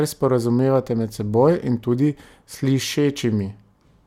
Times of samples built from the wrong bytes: none

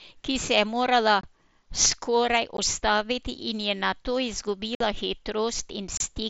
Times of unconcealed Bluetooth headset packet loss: 1.21-1.24, 2.57, 4.75-4.81, 5.97-6.01

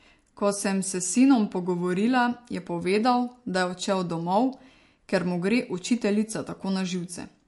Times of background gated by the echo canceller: none

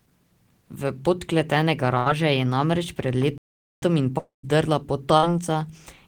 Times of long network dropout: 4.18-4.45

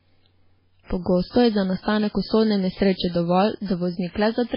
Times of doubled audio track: none

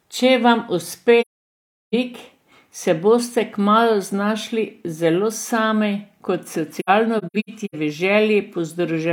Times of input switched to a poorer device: none

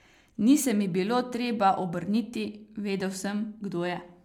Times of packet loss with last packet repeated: none

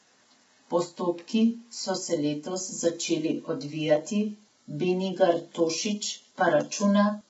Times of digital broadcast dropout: none

